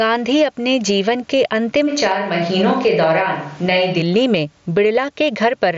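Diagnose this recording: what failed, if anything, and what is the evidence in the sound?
The whole clip has gain pumping, with the gain swinging by around 10 dB. The likely cause is an input gain set far too high, with a fast limiter in the call processing clamping down on every peak.

From 1.89 s, right after "अपने जीवन के अंतिम", to 3.99 s, where "दिल्ली में" begins, there's a switch to a distant microphone. The sound abruptly turns roomy and hollow, with thinner bass and background noise roughly 35 dB under the speech, while the level barely moves. The likely cause is that the close mic's feed dropped at capture and a farther one filled in. The band still stops near 7.7 kHz, as it does through the mSBC headset link.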